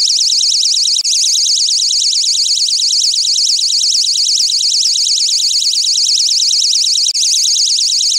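From 3.06 s to 4.87 s the audio falls into a broken-record loop: a fragment of about 0.45 s plays four times back to back, identical each pass, and whatever should have filled that stretch never arrives. The likely cause is a player or stream stall that kept re-sending its last buffered piece. On a waveform the same envelope shape repeats like stamped tiles. A spectrogram shows one block of patterns copied at a regular 0.45 s spacing, with abrupt seams between copies.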